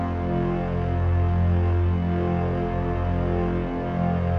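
Nothing's wrong with this one: the audio runs through without any technical fault you can hear.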